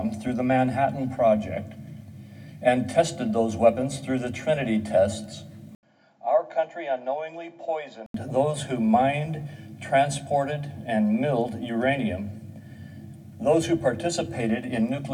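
At 5.75 s the audio drops out for 80 ms, then returns duller, about 10 dB quieter, with nothing above 7.6 kHz and a new low background noise; it recovers at 8.14 s. The gap and changed noise floor point to a likely input switched to a poorer device, not a simple filter.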